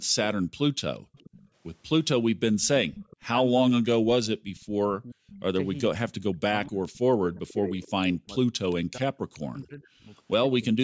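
From 0 to 1.12 s the room background dips and drops out, falling by as much as 40 dB for around 0.4 s in total. This is background gated by the echo canceller, which turned the microphone down while the loudspeaker played.

From 0.97 to 3.22 s a faint copy of the voice returns 431 ms late, roughly 20 dB under the speech. This is an echo leak, likely the canceller letting loudspeaker sound reach the far end. The same 431 ms repeat comes back briefly from 5.27 to 5.42 s, about 25 dB down, and again from 6.83 to 9.39 s, now only about 10 dB below the speech.

Between 3.21 and 10.77 s the voice dips and cuts out in pieces, by up to roughly 40 dB and for about 4 s altogether. This is speech suppressed in double talk, likely because the canceller could not separate its talker from the loudspeaker and turned both down.

Nothing is heard above 8 kHz, which is the call microphone path's normal band limit.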